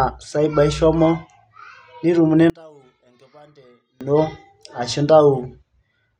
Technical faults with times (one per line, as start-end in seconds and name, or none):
2.50-4.01 one channel inverted